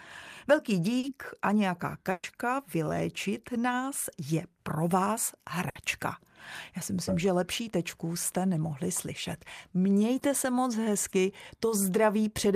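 At 0.99 to 1.05 s, short concealed packet loss: 40 ms never arrived and was patched by extending the preceding sound, leaving a brief smear with no audible gap. A burst of packet loss at 2.11 to 2.25 s is longer: 120 ms of audio is missing, and the patch decays into a held, fading tail before the audio jumps ahead. The burst at 5.69 to 5.77 s does the same over 60 ms. Another short concealed loss comes at 10.19 to 10.23 s, a 20 ms wobble.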